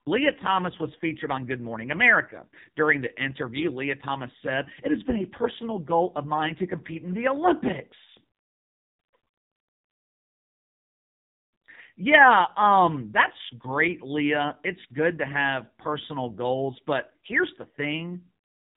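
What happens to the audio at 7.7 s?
At 7.7 s the speech carries the AMR narrowband mobile codec damage that runs through the whole clip. The sound is squeezed through a vocal-tract model fed by sparse pulses, so it comes out buzzy and synthetic, with heavy damage that points to a low mode around 5.9 kbps. On a spectrogram the energy stops at a hard ceiling near 3.8 kHz, leaving everything above it empty.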